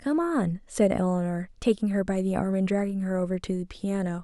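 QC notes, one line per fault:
Nothing to flag here; the speech comes through without any faults worth noting.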